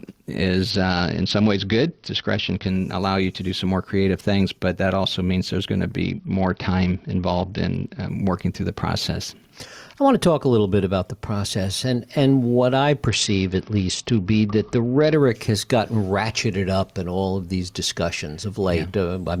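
Speech with gain pumping throughout: the level and background swell and duck by about 5 dB around loud moments, likely a fast limiter reacting to excessive microphone gain rather than steady compression. From 0.70 to 2.68 s, 6.02 to 8.09 s and 13.08 to 15.14 s, a Bluetooth SBC bit pool drop dulls the treble and adds gritty noise, which fits a fall to a bit pool near 8. Its recovery after each stretch separates it from a constant low bitrate.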